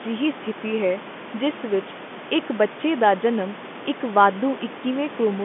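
No technical faults are audible.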